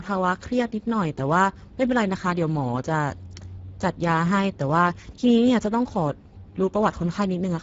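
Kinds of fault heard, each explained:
Speex codec: low-rate CELP speech coding leaves plainly audible damage throughout, with nothing above 7.7 kHz, which fits a bitrate near 10 kbps.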